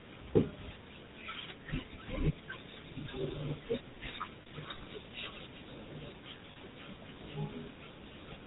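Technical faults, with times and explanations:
Throughout: GSM full-rate codec. The speech passes through the original GSM coder, which models the vocal tract and excites it with sparse regular pulses. Nothing above 4 kHz survives. The result is a plainly audible buzzy, gravelly roughness, which fits a 13 kbps rate.
4.42 to 4.47 s and 6.52 to 6.57 s: lost GSM frames. Each gap lasts about 40 ms, which fits two missing frames. The decoder repeats the last good frame. The sound briefly holds as a rough, metallic ring.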